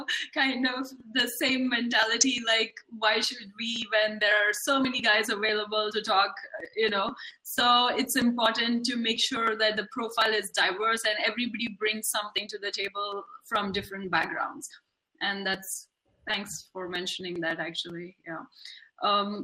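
Throughout, the sound is dull and gurgling, with granular, flickering upper bands. This is likely MP2 compression starving its sub-bands of bits, which fits about 80 kbps.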